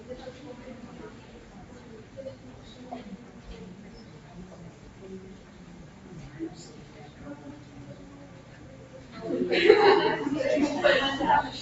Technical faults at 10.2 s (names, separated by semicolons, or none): noise suppressor applied to music or sounds